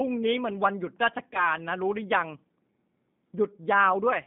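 Throughout, the speech has been squeezed through a low-rate CELP coder that rebuilds each frame from a filter, a pitch predictor and a few pulses, consistent with 8 kbit/s G.729A. The band sits near 150 Hz to 3.7 kHz, and the codec damage is plainly audible as a rough, synthetic edge.

From 1.34 to 1.46 s, VoIP packet loss concealed by the speech codec appears. A single lost 10 ms frame is the likely cause. The decoder carried its last pitch and filter forward at falling gain, and the voice is briefly weakened before it recovers.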